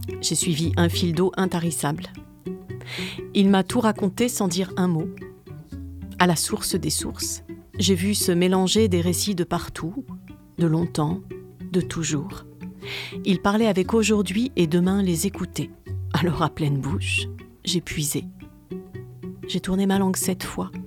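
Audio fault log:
No technical faults can be heard anywhere in the signal, which holds steady in continuity from its opening moment to its last.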